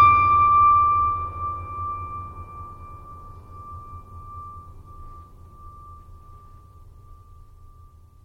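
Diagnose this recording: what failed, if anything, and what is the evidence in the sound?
Codec stage, throughout the music: swirly, watery treble with metallic chirps and smeared attacks points to MP3 compression, likely at a starved bitrate such as 64 kbps. A plain low-pass would dull without this warbling.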